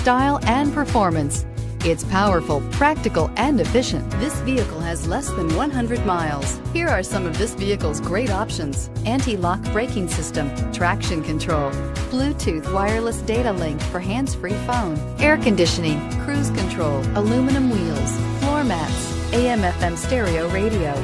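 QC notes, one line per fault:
No fault is heard anywhere in this audio. There is nothing to log against any time.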